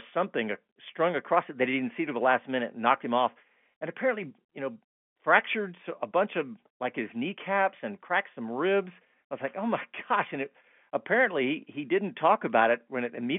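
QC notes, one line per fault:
No faults to note.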